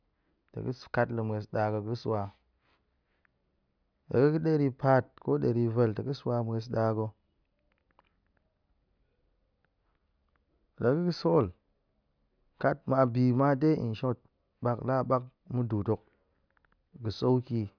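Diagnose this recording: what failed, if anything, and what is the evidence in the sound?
Nothing failed anywhere in the chain, and the speech signal carries no audible technical defect at any stage from capture through playback.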